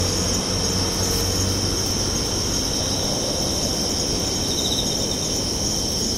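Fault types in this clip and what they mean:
No technical faults can be heard anywhere in the audio.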